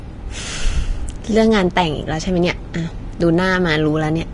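It's a short speech clip with plainly audible Vorbis compression all the way through, likely from a low-bitrate encode, and it sounds like something around 35 kbps. Nothing survives above 10.6 kHz, and the treble that's left has gone hissy and grainy, with blurred consonant attacks.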